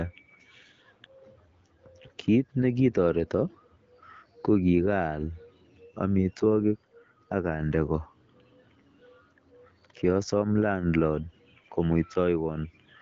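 The speech has no technical faults, and it carries the mark of the AMR wideband (HD Voice) codec at 12.65 kbit/s, which leaves a light coding character and no content above about 7.3 kHz.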